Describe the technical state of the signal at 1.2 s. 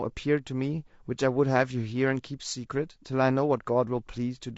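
At 1.2 s, as across the whole clip, the speech sounds rough and grainy, with noise filling the gaps between pitch harmonics, likely from low-delay AAC compression at a rate fitting about 32 kbps. Its very short frames blur harmonic detail, giving graininess rather than the swirling smear of longer-frame codecs.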